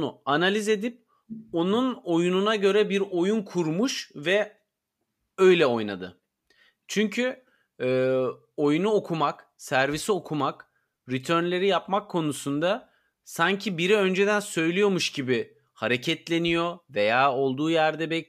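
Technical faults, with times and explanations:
Nothing stood out as a technical problem on listening to this speech recording.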